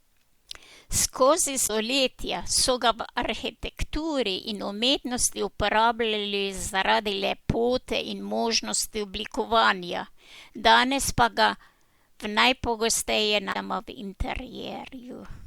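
A speech clip with two short hits of damaged data in a compressed stream, one at 1.63–1.70 s and another at 13.49–13.56 s, right after "v najpogosteje". Each is a quick glitch of about 70 ms. Some bytes in the encoded stream went bad there, so the decoder misread those frames, lost its footing and had to hunt for the next valid frame header before playback settled again.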